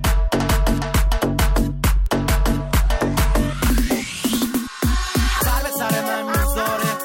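Word clock ticks run through the audio from 0.13 s to 7.0 s, about thirty sharp clicks of uneven strength roughly every fifth of a second. The receiver runs on its own unlocked clock, drifting around 100 ppm from the source, so each slip drops or repeats a single sample.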